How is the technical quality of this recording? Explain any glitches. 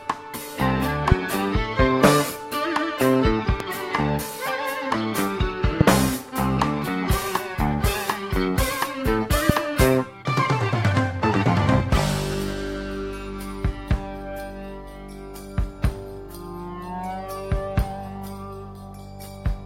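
The main problem is four loud pops in the first half, each roughly 25 ms long, at 1.12–1.14 s, 3.60–3.63 s, 5.81–5.83 s and 9.49–9.52 s. Each is a single sharp crack sitting well above the sound, around 20 dB louder, with the one at 3.6 s a bit softer. The sound carries on underneath. These are likely sudden voltage spikes from something like a switch, static or a driver hiccup, shaped into a short pulse by the circuitry after it.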